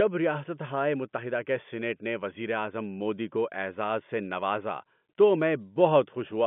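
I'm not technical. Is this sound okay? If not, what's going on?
Yes, this sound is okay, and nothing is going on that needs fixing.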